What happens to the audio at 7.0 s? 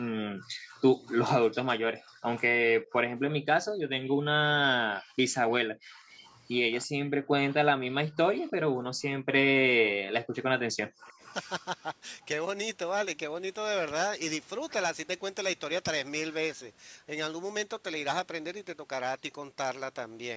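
Nothing goes wrong at 7.0 s: the speech passes through intact, with only the normal call microphone processing audible as trimmed lowest bass and no content above 8 kHz.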